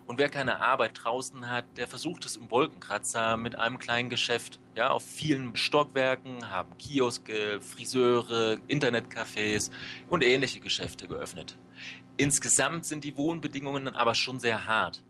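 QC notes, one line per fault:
Nothing stood out on a careful listen.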